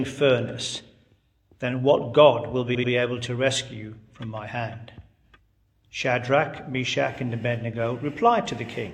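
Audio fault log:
2.71–2.88 s: repeated frames. An 85 ms block, which fits two compressed frames, plays twice more, producing an audible stutter and lengthening the audio by 171 ms.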